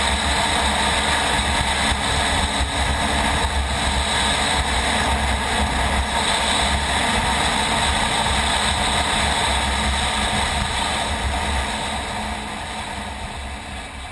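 From start to finish there's a buzz at 50 Hz riding on the sound, which is the resampler restarting on every block. Each 20 ms chunk was converted on its own, apparently halving the rate from 48 kHz to 24 kHz, so every block edge gets a tiny error. At that rate the errors blur into a buzz that's only there while signal is present.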